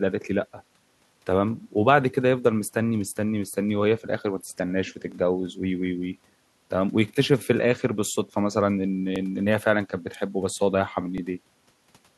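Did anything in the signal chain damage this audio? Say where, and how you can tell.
Yes. The buffering stage produced overlapping chunks: the audio was handled in 2-second blocks, each starting 20 ms before the previous one ended. That 20 ms plays twice at every join, causing the regular stutters in the speech at 3.10, 5.12, 7.14, 9.16 and 11.18 s.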